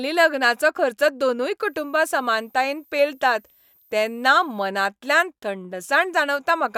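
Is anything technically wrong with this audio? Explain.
Yes. A switching supply whistle runs from 1.64 s to 4.68 s, starting just after "लग्नाचो खर्च दोनूय". A switching power supply near the recording chain is cycling at an audible rate, or two supplies are beating against each other, and that tone leaks into the signal. It is heard as a thin, high whistle, sitting between 13.5 and 13.8 kHz, roughly 35 dB below the speech.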